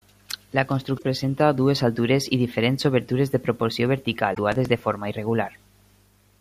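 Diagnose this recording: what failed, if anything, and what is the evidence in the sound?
At the codec stage, damaged data in a compressed stream shows up as two short glitches, 0.95 to 1.02 s and 4.31 to 4.39 s. Each is a single garbled blip as the decoder misreads bad frames and resyncs, unlike buffer faults, which come as rapid repeated ticks.

In the driver or buffer stage, processor overload crackle runs from 4.52 to 4.83 s as a gritty tearing over the speech. Around seven deadlines are missed, each replaying stale audio from a buffer of roughly 3 ms. That dense train of hard-edged repeats is what sets it apart from a one-off codec blip.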